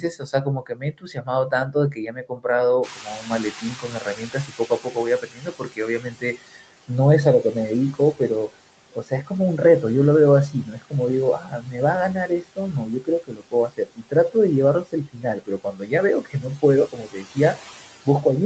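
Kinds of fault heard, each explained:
noise suppressor artifacts: Across the whole clip a noise suppressor works band by band, frame by frame. It pulls the steady background down by about 18 dB. The noise dips away in the pauses and swells back up under the speech.
speech cut by the noise suppressor: The suppressor mistakes parts of the speech for noise and turns them down with the background. This happens from the start to 6.89 s, over roughly 3 seconds in total, dropping by up to about 18 dB. It happens again between 7.43 and 9.83 s, briefly, by up to about 15 dB. It then runs from 10.51 s to the end, by up to about 19 dB. Soft consonants and word endings sound swallowed or faint.
noise suppressor catching up: Around 3 s the room noise jumps by about 22 dB, to roughly 16 dB below the speech. The suppressor's noise estimate lags behind this rise. From 2.83 to 6.38 s the louder noise comes through with only about 14 dB of reduction. 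Over those 3.55 s it gradually sinks as the estimate adapts. The audio stays band-limited, with nothing above 8 kHz, as call microphone processing leaves it.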